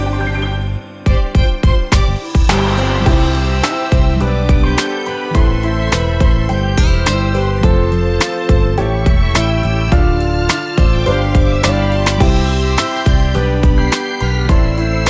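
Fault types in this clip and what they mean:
No technical faults are audible.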